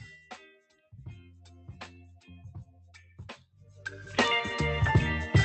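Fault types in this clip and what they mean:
Noise suppressor applied to music or sounds: a speech-tuned suppressor keeps mistaking steady parts of the audio for noise, so levels swing by roughly 5 dB throughout, leaving held sound and decays wavering and thinner while sharper onsets pass through largely intact.
Sound cut by the noise suppressor: at 3.03 to 3.19 s and again at 3.37 to 3.82 s, the suppressor clamps down on sustained or fading sound it judged to be noise, dropping it by about 5 dB and then about 14 dB, so those stretches sink in level.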